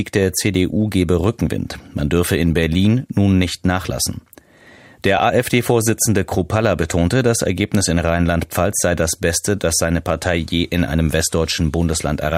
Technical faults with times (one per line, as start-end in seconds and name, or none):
5.18 lost LE Audio frames